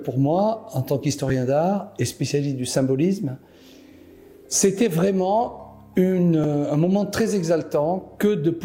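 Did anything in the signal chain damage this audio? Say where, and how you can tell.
Yes. A repeated buffer occurs at 1.29 s and 6.44 s at the driver or buffer stage. Each time, a 5.8 ms slice plays twice with a hard join, heard as a brief click. The length fits a 256-sample buffer replayed because fresh audio arrived late.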